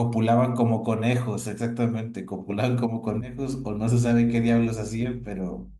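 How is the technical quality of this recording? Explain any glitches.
The recording has one clear problem: mains hum comes in about three seconds into the speech and stays there to the end.

From 3.05 s onward there's a steady low tone at 50 Hz, sitting roughly 20 dB under the speech. That's the power line leaking into the signal, likely through a ground loop or a transformer sitting close to the cabling. It comes across as a constant, buzzy drone with a bit of low harmonic edge.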